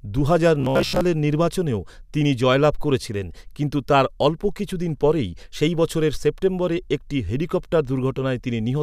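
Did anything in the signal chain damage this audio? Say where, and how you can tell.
Yes. From 0.60 to 1.01 s there is robotic sound from repeated short buffers, likely a driver or buffer underrun. Most of the speech becomes a rigid buzz near 67 Hz, which fits a 15 ms chunk looping. Unlike mains hum, it follows the speech's rhythm.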